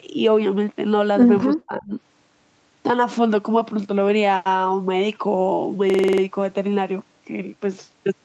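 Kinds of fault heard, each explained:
Speech suppressed in double talk: Between 1.55 and 1.94 s the speech level falls away in uneven pieces, at its deepest by about 25 dB, for roughly a third of a second in total. The likely cause is an echo canceller turning the talker down while the far side also spoke, mistaking both for echo. Unlike a dropout or packet loss, the voice dips, thins or cuts out in pieces rather than being lost in transmission.
System hang loop: From 5.90 to 6.22 s one 46 ms slice of audio repeats exactly seven times, giving a hard stutter at about 21.5 Hz. That loop length fits a 2048-sample buffer replayed by the sound hardware while the system stalled. Unlike codec artefacts or jitter-buffer stretching, each repeat is identical and sample-exact. The speech then resumes without any missing stretch.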